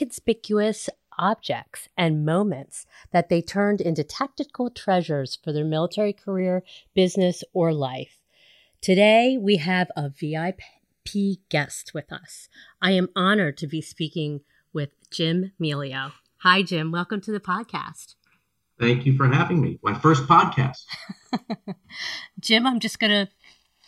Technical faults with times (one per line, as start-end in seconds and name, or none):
0.00-23.87 channels drifting apart